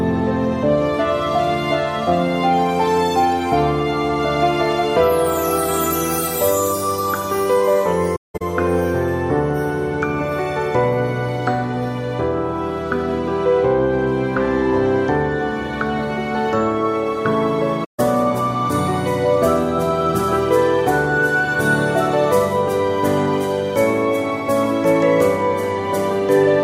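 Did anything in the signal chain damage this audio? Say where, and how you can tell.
Yes. The damage is at the codec stage: AAC frame loss with muting, where the decoder had no data for some frames and zeroed their spectrum instead of concealing them. From 8.15 to 8.42 s about 235 ms is missing across 256 ms, the longest unbroken stretch roughly 0.2 s. From 17.84 to 18.00 s about 150 ms drops out. Overlapping transform windows fade each hole out and back in, leaving soft-edged silences.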